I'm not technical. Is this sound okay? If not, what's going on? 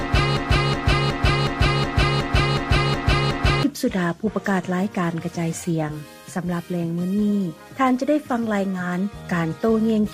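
No. A broken-record loop is running from the very start until 3.63 s: one short piece of sound, about 0.37 seconds long, plays over and over, nine times in a row, with no gap between repeats. The likely cause is that the player or stream stalled and kept replaying the last fragment it still had in memory. Whatever should have been heard during those first few seconds is simply missing.

Between 5.76 and 8.99 s there is digital radio blending to analogue. A hybrid radio lost its clean digital signal and smoothly switched, over about a third of a second, to the ordinary FM broadcast of the same station, then switched back later. During that stretch the sound drops slightly in volume and a faint background hiss appears.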